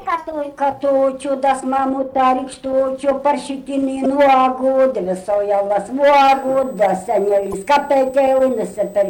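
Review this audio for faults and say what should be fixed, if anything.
Damaged data in a compressed stream at 0.69–0.73 s, 4.02–4.06 s and 7.50–7.54 s, each about 40 ms. Corrupted bytes there make the decoder misread or reject frames and lose sync while it searches for the next valid frame header, briefly disrupting the sound. Prevent it by checksumming files and streams end to end and re-fetching or re-encoding from a clean source.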